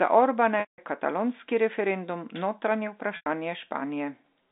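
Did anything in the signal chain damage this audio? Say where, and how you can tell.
Yes: packet loss with pitch repetition, a network-stage fault, at 0.60 to 0.78 s (180 ms, just before "katalonski referendum") and 3.16 to 3.26 s (100 ms). The gap lengths point to runs of lost 20 ms packets. At each gap the receiver loops the last pitch period into a brief held buzz. Both gaps are longer than that loop's roughly 50 ms fade, so it dies to silence before the sound cross-fades back in over the band-limited G.711 telephone line.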